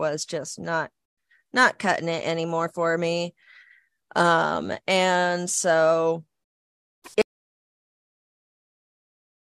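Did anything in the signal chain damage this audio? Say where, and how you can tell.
Yes. The input feeding the recorder was lost at about 7.22 s, most likely through a disconnected device, a failed link or an accidental mute, while the recorder kept writing silence. The result is an audio dropout to silence: the speech stops abruptly mid-flow and the remaining time to the end of the clip is silence with no room tone at all. Anything spoken after that point is gone.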